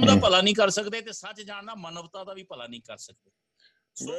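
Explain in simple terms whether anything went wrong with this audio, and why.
Zipper noise, from 0.67 to 1.10 s: the volume drops in about a hundred tiny jumps per second instead of gliding, and each jump ticks audibly.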